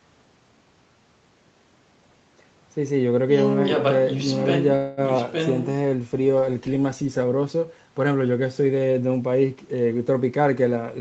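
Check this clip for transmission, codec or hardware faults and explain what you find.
Three transmission faults can be heard in the call audio, whose top end stops at about 8 kHz.

From 4.75 to 5.00 s the last sound stretches into a fading buzz for about 0.22 s, then resumes unbroken: a call audio freeze, likely from delayed packets emptying the jitter buffer.

At 5.17 to 5.21 s there is a brief smear where roughly 40 ms of audio never arrived: short concealed packet loss, patched by extrapolating the preceding sound.

From 10.23 to 10.91 s the sound runs hurried at about 111% speed, same pitch: jitter buffer speed-up, trimming around 70 ms of pitch periods to reduce delay.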